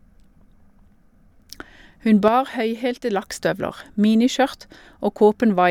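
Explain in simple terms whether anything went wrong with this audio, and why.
Something did go wrong. From 2.28 to 3.22 s the speech suddenly drops noticeably quieter, then snaps back. That's likely one channel dropping out: one side of the stereo signal vanished for almost a second, leaving only half the sound.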